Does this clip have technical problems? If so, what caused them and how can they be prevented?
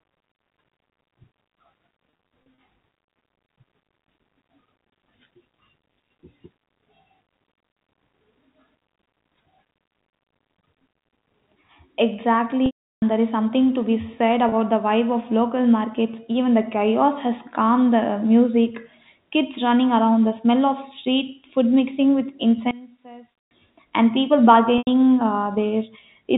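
Yes. There are two kinds of fault.

Packet loss with pitch repetition occurs four times. From 2.1 to 2.58 s, about 150 ms is lost in scattered gaps no longer than 30 ms, giving brief buzzy holds. From 12.66 to 13.02 s, a continuous 360 ms gap fades into silence before the audio cross-fades back. At 14.49 to 14.52 s, between "something to be said" and "the vibe of local", a single 30 ms gap sounds like a slight held note. At 24.78 to 24.87 s, just after "and people", about 90 ms is lost. The gap lengths fit 30 ms packets. In each gap the receiver repeats the last pitch cycle and fades it out, and that steady buzz is what separates concealment from a plain dropout, which would leave a silent hole. A jitter buffer deep enough to absorb delays, plus forward error correction or redundant packets on the network path, would prevent this.

One channel inverted affects 22.71 to 23.51 s, between "street food mixing with" and "and people". 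The level falls by about 19 dB, leaving a faint trace rather than silence. There is no buzz and no fade, which rules out packet concealment. The likely cause is one stereo channel with flipped polarity, so that the shared content cancels when the two are summed to mono. Checking polarity and phase correlation before any mono fold-down would prevent it.

The G.711 telephone band limit is also audible, but it is normal for this format and not a fault.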